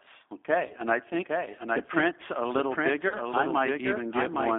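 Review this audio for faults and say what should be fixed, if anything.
The whole clip carries a doubled audio track. A second full-band copy of the speech runs roughly 0.7 s behind the first. It is about 5 dB quieter. It has no reverb tail or room colour, so it is not an echo of the space. It is likely a second capture through a slower path, or an edit that left two misaligned copies in the mix. Prevent it by making sure only one capture path or one copy of the track feeds the final mix.

The speech also shows plain G.729 codec damage throughout. The band runs from about 250 Hz to 3.5 kHz, with nothing above. The sound is rough and slightly synthetic. The decoder rebuilds each 10 ms frame from a vocal tract filter, a pitch predictor and a few pulses. That loses fine detail. The damage fits G.729A at 8 kbit/s. Prevent it by carrying the call on a wideband codec such as G.722 or Opus.

Two dropouts were patched by VoIP packet loss concealment in the speech codec. 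They run from 0.67 to 0.73 s and from 3.09 to 3.17 s. Each fits one lost packet of about 30 ms. In each gap, the decoder stretched its last pitch and filter state into a fading sound. Because each frame builds on the previous one, the speech stays weak for a short while after the gap. Prevent it with a jitter buffer, forward error correction or a more stable network path.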